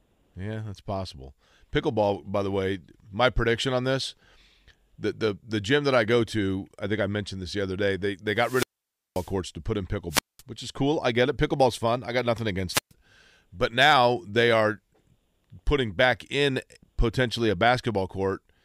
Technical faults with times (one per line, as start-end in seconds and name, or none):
8.36-9.34 wireless microphone squelch dropout
10.10-10.42 wireless microphone squelch dropout
12.70-12.92 wireless microphone squelch dropout